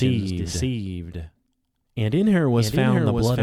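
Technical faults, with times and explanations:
Throughout, doubled audio track: the whole speech clip carries a second copy of itself trailing about 0.7 s behind and roughly 5 dB down, so every phrase comes back as a clean, full-band repeat. It has no decay or room colour, so it never reads as an echo. It just sounds like two takes out of step. That's most likely the signal getting captured twice, once through a slower path, or an edit that left two offset copies stacked.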